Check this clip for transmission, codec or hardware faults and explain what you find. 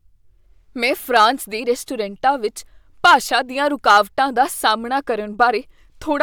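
Hard clipping occurs three times in this speech: 1.16–1.26 s, just before "ਦੇ ਰੈਸਟੋਰੈਂਟਾਂ ਵਿੱਚ"; 3.05–3.35 s, right after those words; and 3.88–3.98 s. Peaks overdriven by about 3–4 dB are sliced flat, adding high harmonics and crackle. Unlike soft saturation, the distortion is abrupt and confined to the loudest moments.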